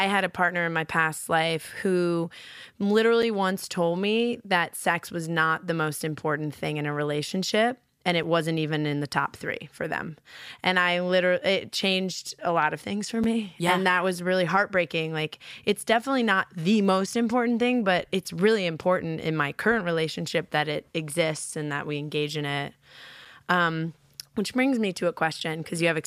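Speech delivered in 5-second chunks leaves a gap between chunks at each join, about 6.5 ms of silence: 3.22, 8.23, 13.24, 18.24 and 23.25 s. Nothing is lost, but each join is a brief hole.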